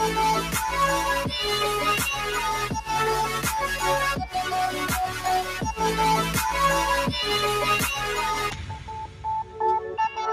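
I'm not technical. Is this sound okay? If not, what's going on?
No. A noise suppressor built for speech was left on, and this is a noise suppressor applied to music or sounds. It mistakes steady, lingering sound for background noise. So the level keeps dipping and recovering, and held parts and fading tails sound thinner and wobbly.

At three spots the sound is cut by the noise suppressor more heavily. Between 5.08 and 5.24 seconds it briefly sinks. From 8.5 to 9.25 seconds, and again from 9.44 to 9.59 seconds, it drops more deeply.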